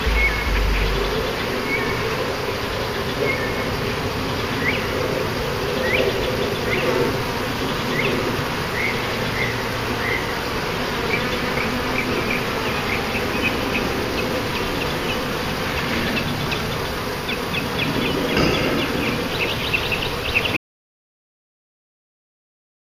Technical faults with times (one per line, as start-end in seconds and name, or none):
20.57-22.92 audio dropout to silence